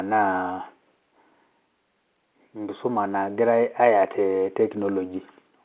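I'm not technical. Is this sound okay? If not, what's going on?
Yes, nothing is going wrong in this speech recording. It has the slightly narrow, phone-like sound of G.711 telephone coding, which is the normal way landline calls carry speech.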